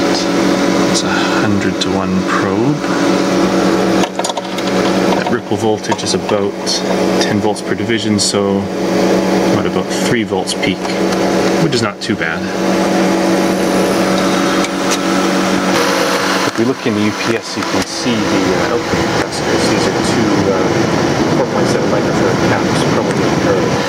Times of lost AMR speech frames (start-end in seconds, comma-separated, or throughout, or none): none